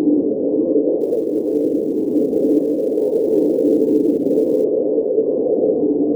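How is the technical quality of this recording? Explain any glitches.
The quality is let down by sample clock jitter from 1.01 to 4.64 s. The converter's clock wobbles by several microseconds, so samples are taken slightly early or late at random. That error tracks the waveform's slope, leaving a grainy hiss roughly 35 dB below the sound, strongest on loud, bright moments.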